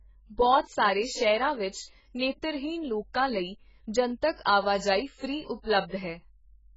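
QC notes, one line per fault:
throughout, AAC compression: dull, smeared, with a warbly fizz on sibilants and nothing above 7.6 kHz, likely a starved AAC-LC encode, fitting roughly 12 kbps.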